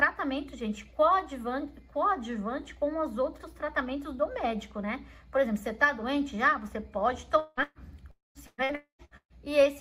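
At 7.39 to 7.60 s the sound is replaced by a continuation of its last moment that fades out, leaving about 10 ms of near-silence before it resumes with roughly 180 ms missing. This is likely a long network dropout. On a spectrogram the final spectral slice smears horizontally and darkens, and the waveform envelope tapers to a flat line.

Right after, from 7.63 to 7.78 s, a burst of packet loss removes about 120 ms. The receiver extends the preceding sound and turns it down, ending with about 30 ms of silence. The spectrogram shows a short smeared band. The waveform shows a decaying repeat and then a brief flat gap before the audio returns.

From 8.11 to 8.38 s, a likely long network dropout loses about 240 ms. The filled portion fades, and about 170 ms of silence follows. That silence is a clear empty vertical strip on the spectrogram and a flat stretch in the waveform.

From 8.47 to 9.33 s there is repeated packet loss, heard as robotic sound. 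Four gaps hide about 41% of the span, and the longest is 130 ms. The sound turns choppy as patched fragments alternate with real audio. The spectrogram shows a comb of smeared, frozen segments.

Inside that stretch, from 8.75 to 9.02 s, another likely long network dropout removes about 240 ms. It fades into about 120 ms of silence, which appears as a blank gap in both the spectrogram and the waveform.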